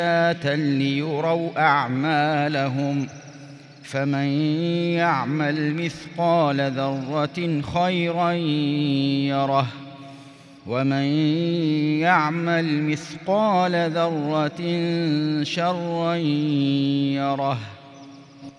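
No technical faults are audible anywhere in the recording.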